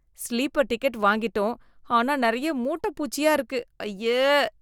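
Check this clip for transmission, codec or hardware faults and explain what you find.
No faults found; nothing in the speech points to any problem in the signal chain.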